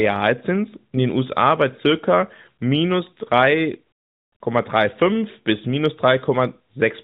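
No technical faults are audible.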